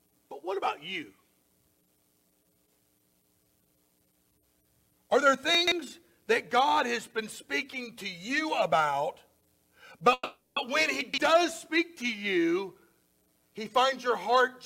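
At 5.55 to 5.72 s a brief jumbled moment is heard: chunks out of order. A block of about 43 ms plays roughly three blocks late, so nothing is lost but the sequence is scrambled and there are three hard joins.

From 10.13 to 10.58 s the sound stalls into a fading buzzy continuation of the last moment, ending in about 60 ms of silence before resuming where it stopped. This call audio freeze was likely caused by delayed packets draining the jitter buffer, inserting roughly 430 ms with nothing missing.

The same chunks-out-of-order jumble returns at 11.01 to 11.18 s, with a block of the same size again landing about three places late.

From 13.79 to 14.45 s the audio runs hurried at unchanged pitch, about 114% speed. This jitter buffer speed-up comes from the receiver trimming many short pitch-period slices, around a tenth of a second in total, to shrink the excess buffered delay.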